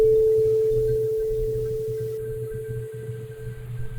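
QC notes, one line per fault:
2.17–3.98 s: channel delay (comb filtering). One channel lags by roughly a tenth of a millisecond, a few samples. Mono summing cancels fixed notches from around 5 kHz upward, leaving the top hollow and dull.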